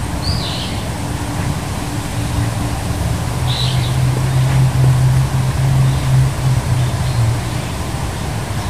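Nothing here needs flagging: the audio runs without a single dropout, glitch or other technical hiccup along the way.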